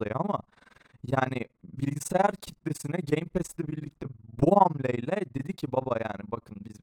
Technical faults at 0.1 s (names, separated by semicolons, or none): overlap-add ripple